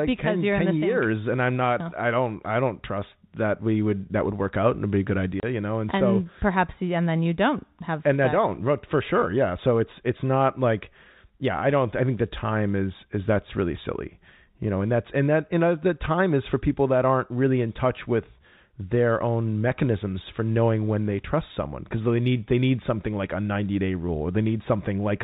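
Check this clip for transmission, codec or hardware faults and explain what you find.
One dropout stands out: packet loss filled with silence at 5.4 s, right after "and be a good" and before "you know". A 30 ms hole, which fits a single lost packet, was replaced with dead silence, so the speech cuts out abruptly with hard edges. The narrowband G.711 telephone coding comes through as expected.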